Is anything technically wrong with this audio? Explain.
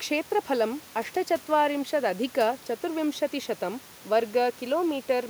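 No, nothing is technically wrong with this audio.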